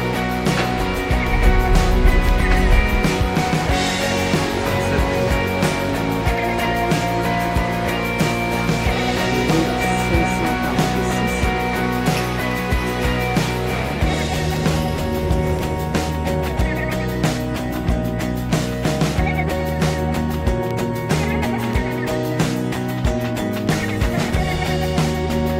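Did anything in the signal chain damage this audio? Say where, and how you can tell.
Yes. It's the driver or buffer stage: periodic USB or driver dropouts. From 0.24 s to 24.81 s there's a tick every 1.024 s, about thirty in all, and each is audible only when there's signal underneath. Something is stalling the USB bus or the audio driver on a fixed schedule, and each stall drops a tiny sliver of audio, well under a millisecond, which gets filled with silence. That dead-regular spacing is the giveaway for a scheduled background task.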